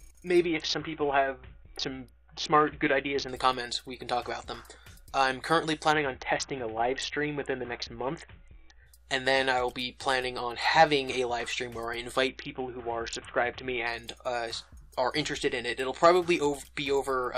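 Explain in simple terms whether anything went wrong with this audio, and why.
Three times the wireless Bluetooth link got crowded, and the sending device coped by squeezing the audio into far fewer bits. This is a Bluetooth SBC bit pool drop, and it happened from 0.45 to 3.29 s, 5.92 to 8.86 s, and 12.28 to 13.87 s. With so little data, the highest frequencies get dropped and the rest are stored roughly, so during those stretches the sound turns dull and muffled, with a gritty, grainy noise, until the connection recovers.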